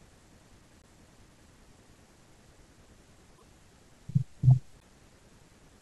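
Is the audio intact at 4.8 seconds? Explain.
No. From 4.79 to 4.83 s the speech skips ahead with a brief garbled glitch, likely a broken MP3 bit reservoir, where frames after a cut decode from another frame's bytes.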